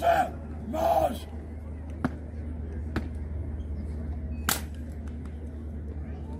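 No technical faults can be heard anywhere in the audio.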